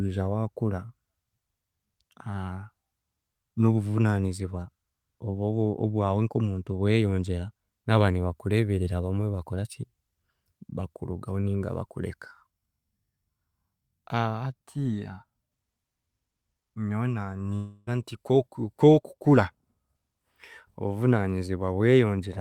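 At 17.55 s the speech suddenly gives way to a buzzy, smeared continuation of the last sound, which fades for about a third of a second and never actually drops to silence before the talker picks up again at 17.89 s, with roughly 320 ms of speech simply gone. That pattern points to a long network dropout: the stream likely stalled, and the receiver papered over the hole by stretching out what it had already played.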